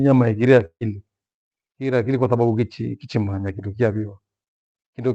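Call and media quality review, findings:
Long network dropout, 0.65–0.83 s: speech cuts out, last sound smeared into a fading buzz for about 150 ms, then silence, resuming with roughly 160 ms lost. Likely packet loss upstream; receiver concealment extrapolated until it gave up.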